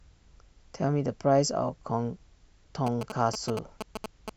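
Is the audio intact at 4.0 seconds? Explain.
No. At 4.0 seconds the speech is overlaid by GSM signalling bursts, running from 2.87 to 4.30 s. A nearby 2G phone is exchanging short groups of radio bursts with its network, and the audio circuitry rectifies that RF into an audible envelope at about 217 Hz. The result is a galloping dit-dit-dit of short buzzes, only a little quieter than the speech. Mains hum, by contrast, is a steady, unbroken tone rather than these clustered, stuttering groups.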